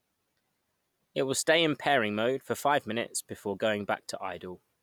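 Listening to this speech recording, nothing technically wrong stood out at any point.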